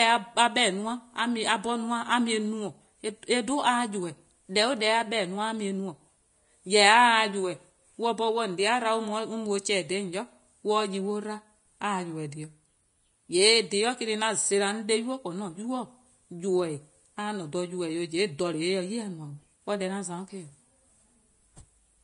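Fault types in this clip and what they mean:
Low-bitrate audio saved at a high bitrate: the speech has nothing above 10.5 kHz throughout, likely left by an earlier low-rate Vorbis encode that a later high-bitrate MP3 cannot restore.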